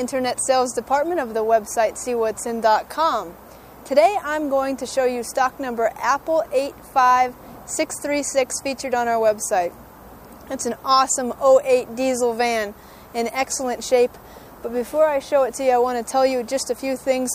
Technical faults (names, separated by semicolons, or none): none